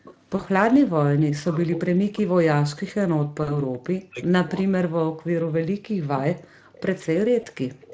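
Echo leak, 0.03 to 0.16 s: a faint delayed copy of the voice trails the speech by about 0.38 s, roughly 25 dB below it. Its likely cause is a far end on a loudspeaker whose echo canceller didn't remove all of what its microphone picked up, so the leftover came back down the line.

VoIP packet loss concealed by the speech codec, 0.35 to 0.43 s: about 40 ms of audio went missing. The decoder filled the gap by carrying its last pitch and filter forward at falling gain, so the sound smears into a short buzzy tone or coloured noise that fades. The voice stays weak or distorted just after the packets resume.

Background gated by the echo canceller, 0.83 to 1.21 s: the room sound drops by as much as about 40 dB for around 0.2 s in total, then comes back. The canceller clamped the microphone hard while the loudspeaker was playing and released it afterwards.

Speech suppressed in double talk, 1.49 to 3.69 s: with both sides talking together, the talker's voice dips, dulls and breaks up for around 2 s in total, with drops near 40 dB. 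The canceller likely couldn't tell the talker from the loudspeaker echo and turned everything down. Packet loss concealment adds another 40 ms smear at 3.43 to 3.57 s.

Speech suppressed in double talk returns at 4.01 to 4.72 s, cutting into the voice for about half a second in total. The background is gated again from 5.0 to 6.75 s, with about 1.5 s of dropouts. At 6.75 to 6.8 s a brief echo leak appears, about 30 dB down. The background gates once more at 7.25 to 7.82 s. Inside that stretch, one 20 ms packet loss is concealed at 7.41 to 7.46 s. The clip ends with a stronger echo leak from 7.82 s, only about 20 dB below the speech. Throughout, the audio carries the light coloration of the Speex codec and stops at 8 kHz.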